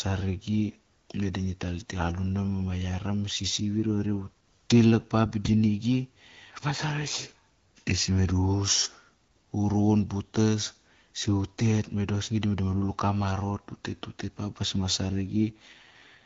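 From 15.5 to 16.19 s the speech turns rough and synthetic with no gap or band change, an AMR rate drop consistent with a fall from 12.65 to 6.6 kbit/s.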